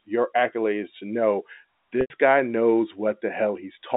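From 2.01 to 2.10 s, right after "your accolades to know", there is packet loss with pitch repetition. About 90 ms of audio went missing. The receiver looped the last pitch period to cover it. The gap sounds like a buzzy hold that fades into silence, and the speech returns with a short cross-fade on "guy knows".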